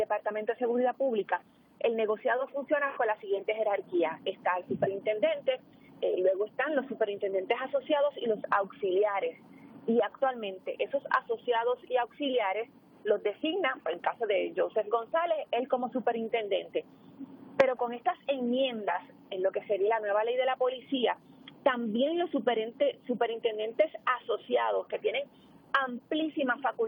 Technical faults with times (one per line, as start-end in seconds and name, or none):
none